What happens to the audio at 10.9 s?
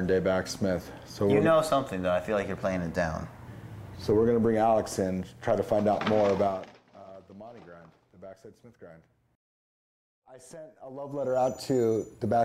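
Right around there you're hearing zipper noise, running from about 10.84 to 11.42 s. The level drops or rises by around 20 dB, but instead of gliding it moves in 1 dB jumps, roughly 40 a second, with nothing smoothing between them. Each jump leaves a tiny click, so you get a fast ticking buzz riding on the sound for that half-second or so.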